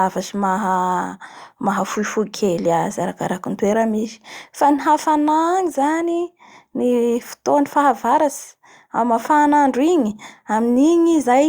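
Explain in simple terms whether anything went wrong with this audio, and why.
Nothing went wrong here: the speech comes across without any glitch, dropout or distortion at any point in the recording.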